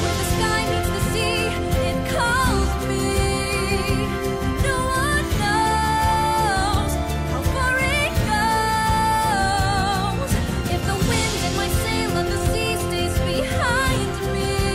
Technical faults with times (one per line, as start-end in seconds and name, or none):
none